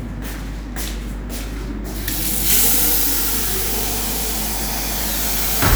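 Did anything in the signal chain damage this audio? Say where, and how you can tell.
Yes. Mains hum runs through the whole clip as a steady 50 Hz tone with low harmonics, sitting only somewhat below the sound itself. The damage is in the analogue wiring, where a ground loop or nearby transformer coupled the power line into the signal before conversion.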